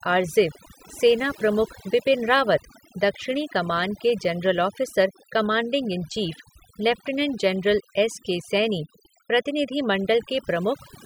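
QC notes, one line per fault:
Throughout: overdone noise removal. The noise reduction on this speech was pushed far too hard, so every frequency band that sits close to its idea of the noise floor gets pulled way down or switched off entirely. The softer parts of the voice get caught in that too. That's why the gaps between phrases drop away with little twinkly specks left behind.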